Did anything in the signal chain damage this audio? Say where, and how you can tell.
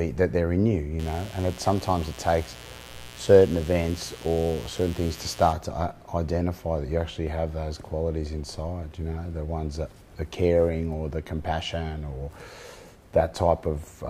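Yes: mains buzz from 0.99 to 5.53 s, an analogue wiring fault where switching spikes at 60 Hz harmonics leak in, giving a raspy buzz roughly 20 dB below the sound.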